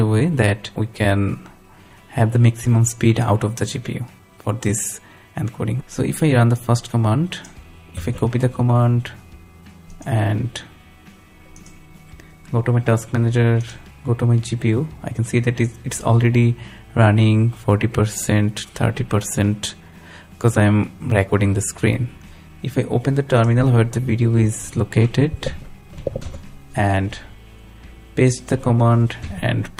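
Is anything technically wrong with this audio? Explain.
Yes, there's a timing problem running through the whole thing.

Clock drift between sender and receiver is the root issue. The sending side's clock is running fast, somewhere around 4 percent ahead of the receiver's. Audio keeps arriving faster than it's played out, so the jitter buffer keeps creeping fuller and the receiver has to throw material away to keep up. It never settles, so the sound has a faint, persistent unsteadiness from start to finish.

The repeated timing corrections are how that drift shows up, from about 0.21 s right through to 29.77 s. The receiver keeps trimming short slivers out of the stream, always dropping rather than repeating, which pushes playback along at roughly 103 percent speed. The cuts are small and unevenly spaced, so you mostly hear little hiccups and a tempo that feels slightly rushed and uneven rather than any obvious dropout.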